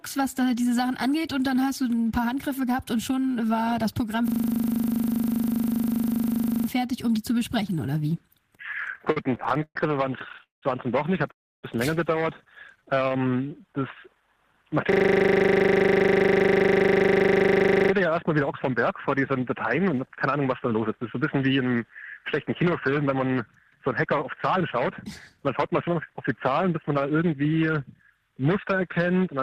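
From 4.28 to 6.68 s there is a system hang loop. The driver or host froze while the sound hardware kept replaying the same 40 ms ring buffer, so one fragment repeats 60 times at 25 Hz and comes across as a rough, rattling buzz in place of the audio.

Repeated stalls (stutter) run from 8.84 to 9.76 s and from 10.19 to 10.63 s. Packets arrived late enough that the jitter buffer kept running dry. The receiver stretched the last sound across 14 gaps totalling 288 ms, the longest 123 ms. It then did the same across 6 gaps totalling 239 ms, the longest 189 ms. The audio drags and catches, with nothing lost.

At 11.31 s a call audio freeze sets in. The sound is held briefly and then goes quiet for about 290 ms before picking up where it left off at 11.64 s. This points to held-up packets likely emptying the jitter buffer, which inserted a 319 ms gap.

A shorter stall sequence runs from 12.81 to 13.20 s, with 7 gaps of at most 15 ms (67 ms total). 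It overlaps a jitter buffer slow-down from 12.84 to 13.81 s. There, the receiver rebuilt its reserve by repeating pitch periods, adding 104 ms. Playback runs at 90% speed with unchanged pitch, so sounds are drawn out.

The system hang loop returns from 14.92 to 17.92 s. The same 40 ms buffer cycles 75 times, again giving a 25 Hz buzz.

Two jitter buffer speed-up passes follow. From 19.17 to 21.76 s the receiver trimmed roughly 200 ms of pitch periods to shed excess delay, running at 108% speed. From 22.34 to 27.34 s it removed about 300 ms at 105%. The pitch holds steady, but the audio sounds hurried.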